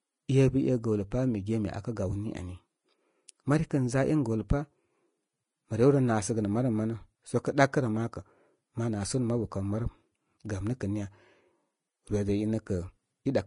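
Throughout the speech, the top stops at 10.5 kHz and fine detail turns hissy and grainy, likely Vorbis compression squeezed to something like 30 kbps.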